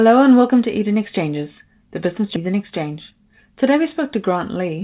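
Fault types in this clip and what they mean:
Skip ahead: Right after "the business", at about 2.36 s, roughly a second of speech just vanishes. The stream lost that chunk while later audio was already queued, so playback jumps straight on, with no silence or filler covering the join.
Jitter buffer speed-up: Right after the skip, from 2.46 to 3.72 s, and again from 4.28 to 4.79 s, the receiver trims tiny pitch-period slices to drain a backed-up buffer. The speech runs at about 107% with unchanged pitch, losing around 100 ms, then 40 ms.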